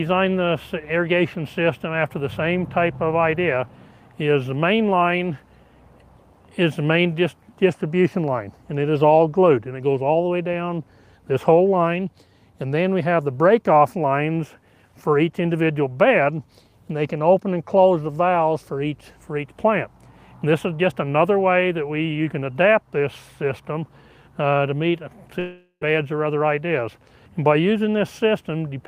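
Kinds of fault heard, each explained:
long network dropout: From 25.39 to 25.83 s the sound stops advancing. The last moment is stretched into a tail that fades over roughly 0.4 s, then about 70 ms of near-silence, before the audio resumes with about 0.42 s lost. The likely cause is a stall in packet arrival that the receiver tried to cover. On a spectrogram this shows as smeared, repeating bands thinning to a blank gap. The waveform shows a decaying envelope, then a flat line.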